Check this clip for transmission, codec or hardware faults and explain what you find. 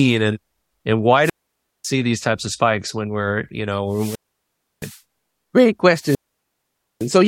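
Three wireless microphone squelch dropouts, at 1.21–1.87 s, 3.89–5.01 s and 5.98–7.11 s. Each time the radio signal fades, hiss rises, and the receiver's squelch mutes the speech for 0.55, 0.67 and 0.86 s respectively.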